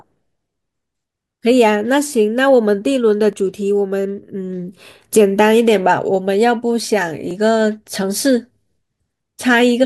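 Audio missing between chunks at 3.33 s and 7.31 s: the speech skips abruptly, losing roughly 20 ms each time, likely where a 4-second recording chunk closed and the next opened without a gap.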